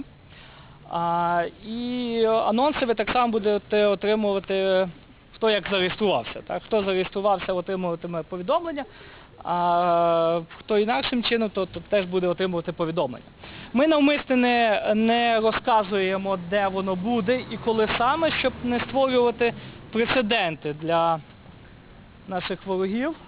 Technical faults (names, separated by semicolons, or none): aliasing